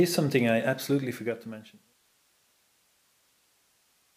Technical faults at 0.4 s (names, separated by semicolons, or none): none